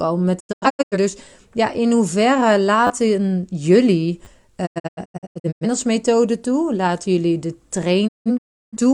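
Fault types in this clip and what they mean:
Digital broadcast dropout: the receiver mutes on lost frames, heard as quick fades into scattered holes in three patches, the last after "jullie de".
Repeated buffer: late audio makes the device replay its last 10 ms chunk, so you get brief buzzes, the first right after "ja in hoeverre".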